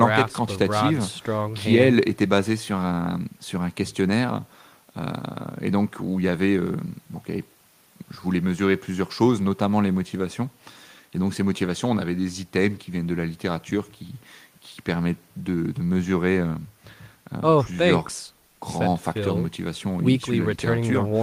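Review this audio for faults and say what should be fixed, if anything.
Nothing here needs fixing; no faults are audible.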